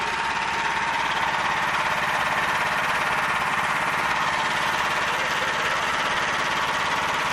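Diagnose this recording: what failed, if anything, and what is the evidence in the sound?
The codec stage is at fault throughout the clip. The sound is dull, with a gurgling, granular texture and upper frequencies flickering in and out, which points to MP2 compression, most likely at a low rate around 80 kbps. With too few bits, MPEG Layer II switches off whole upper sub-bands and coarsely quantises the rest. That steady, band-limited smearing is what separates it from transmission damage, which comes and goes in bursts.

A brief DAB burbling event from 6.10 to 6.15 s lies in the transmission path ahead of the decoder. Over about 50 ms short blips of noise appear in single sub-bands. That fits six frames hit at an error rate of about 0.15 percent. Uncorrected bit errors corrupted samples in the MP2 stream. Unlike the constant codec dullness, this is a short, isolated outburst of burbling.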